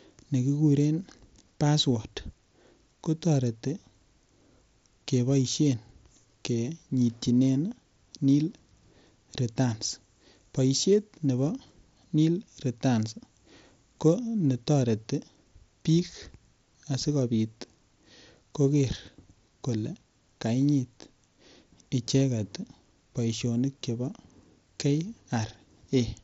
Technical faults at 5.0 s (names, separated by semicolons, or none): none